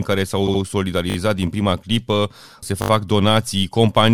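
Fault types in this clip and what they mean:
Repeated frames: At 0.47 to 0.61 s, a block of about 70 ms of compressed speech plays twice more, adding about 0.14 s, which fits a few frames decoded again. The longer repeated unit gives an audible stutter rather than a buzz.
Repeated buffer: At 1.10 to 1.16 s and 2.82 to 2.90 s, the device replays a 20 ms piece three and then four extra times, with hard joins.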